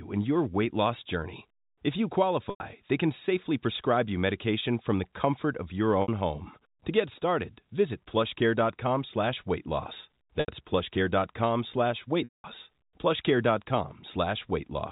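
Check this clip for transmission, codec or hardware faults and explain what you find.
Packet loss with pitch repetition occurs four times: at 2.5 s (100 ms, just before "they can safely prescribe"), 6.02 s (60 ms, after "the comfort of your"), 10.4 s (80 ms, after "slash weight loss") and 12.24 s (200 ms). Each time the receiver loops the last pitch period to fill the gap. Unlike a plain dropout, which goes straight to silence, this leaves a held, buzzy tone. The 200 ms gap fades to silence before the speech cross-fades back in.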